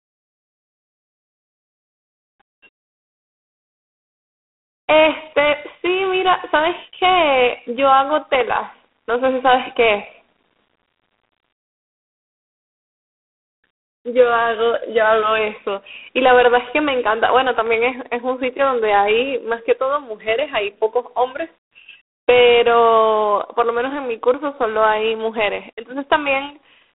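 From start to finish the speech has passed through G.726 ADPCM coding at a rate that sounds like 24 kbit/s, with each sample reduced to a coarse difference from a prediction. This leaves a harsh, rasping hiss that swells with the voice, nothing above 3.8 kHz, and a 250 Hz to 3.5 kHz telephone band.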